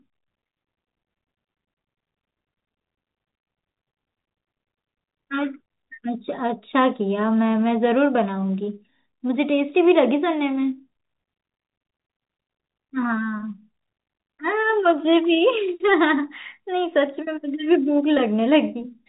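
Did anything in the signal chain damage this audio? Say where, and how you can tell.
No, nothing in the signal chain damaged this audio.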